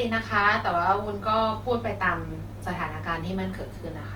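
Throughout the speech, Opus compression damage is plainly audible: the tone is grainy and rough, with noisy texture where band energy was kept but the fine detail was filled in. The likely cause is music-mode Opus at around 24 kbps, still reaching 20.1 kHz.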